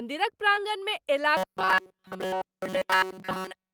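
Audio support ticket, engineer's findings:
Short concealed packet loss at 0.55–0.59 s and 2.17–2.21 s. Each is a brief smear in the sound. About 20 ms of audio failed to reach the decoder in time at each point. The receiver's concealment extended the preceding sound across the gap, for roughly 12 ms at the first and 25 ms at the second, then cross-faded back into the real stream. The component is the jitter buffer and packet-loss concealment on the receive path.

Robotic sound from repeated short buffers, 1.37 s to the end of the clip. A rigid metallic buzz at 188 Hz that roughly follows the speech contour. A period of about 5.3 ms points to playback likely starving and replaying the same short buffer. Essentially all of this stretch is repeated material, and the true audio is skipped. The component is the audio output buffer or device callback, which is underrunning continuously.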